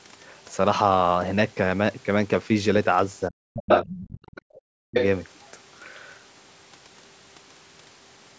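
A speech recording, and around 3.29 to 4.39 s the talker gets hit by speech suppressed in double talk: their voice sinks by roughly 40 dB in pieces, about a second of it in total, likely because the echo canceller couldn't tell them apart from the far end and clamped down on everything. The other side's voice leaking through turns up three times, likely residual loudspeaker echo the canceller didn't remove. From 3.69 to 4.0 s it's actually louder than the talker, by about 5 dB. From 4.37 to 4.59 s it's a faint trace about 25 dB down, and from 4.91 to 5.06 s it sits about level with the speech. In between, at 4.67 to 4.91 s, there's background gated by the echo canceller. The room tone drops by about 40 dB for roughly 200 ms while the canceller holds the mic down, then comes back. The band tops out at 8 kHz, which is just the call's normal mic processing.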